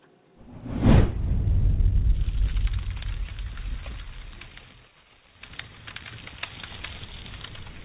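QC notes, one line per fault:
The signal has no faults, carrying the normal band limit of a call path with nothing above 4 kHz, which fits G.711 A-law telephone coding at 64 kbps.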